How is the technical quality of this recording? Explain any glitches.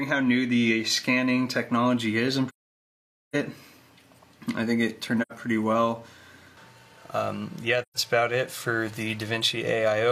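The recording has three dropouts from AAC frame loss with muting: 2.49 to 3.35 s (about 0.85 s), 5.21 to 5.32 s (85 ms) and 7.82 to 7.97 s (128 ms). Missing frames were decoded as silence, so the sound fades out, stays silent, then fades back in as the overlapping windows blend into the neighbouring frames. The edges are soft. The gap lengths fit whole blocks of roughly 43 ms each.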